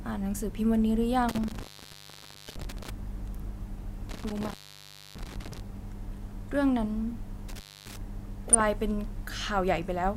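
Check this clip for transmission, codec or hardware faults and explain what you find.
Two faults are audible in this speech clip: an intermittent contact that drops the signal three times, and DAB burbling in two short bursts.

Intermittent contact, from 1.29 to 2.90 s (open for about 0.93 s), 4.09 to 5.60 s (about 0.62 s) and 7.49 to 7.97 s (about 0.26 s). The speech cuts out abruptly with crackle at each edge, leaving faint hiss. A loose plug or cable is briefly breaking the connection.

DAB burbling, from 2.48 to 2.62 s and 8.48 to 8.62 s. Each burst adds short blips of noise. Weak reception lets a small fraction of a percent of bit errors slip past error correction, corrupting a handful of MP2 frames so noise blips appear in single sub-bands.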